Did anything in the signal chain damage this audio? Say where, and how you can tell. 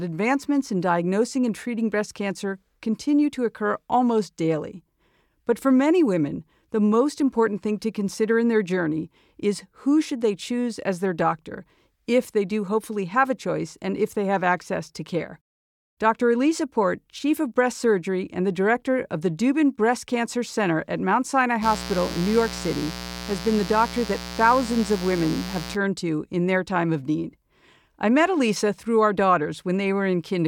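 Yes. Mains buzz enters in the analogue wiring from 21.6 to 25.8 s. A raspy 60 Hz buzz sits not far below the speech. Switching spikes produce its harmonics.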